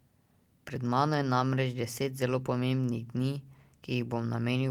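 A short bit of speech, and there's nothing technically wrong to point out here.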